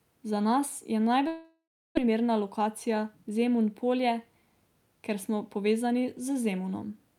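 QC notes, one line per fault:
1.27 to 1.99 s, long network dropout. The speech stops and the last sound is stretched into a fading buzz. About 0.3 s of near silence follows before the speech returns. Around 0.6 s of the original audio never comes back, so the speech resumes further on with a gap in it. The likely cause is a long break in packet delivery. The receiver concealed the missing stretch as best it could, then gave up. Playback also ends up shifted by about 70 ms.
2.60 to 3.32 s, jitter buffer speed-up. The speech runs faster than normal, at about 107% of its pace, while its pitch stays the same. It sounds hurried. The receiver's buffer had built up more audio than it wanted, as happens after delayed packets arrive in a burst. To shed that delay it cut out many short pieces, each one or a few pitch periods long, totalling about 50 ms.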